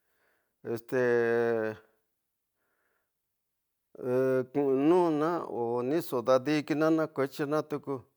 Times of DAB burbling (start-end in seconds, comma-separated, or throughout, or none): none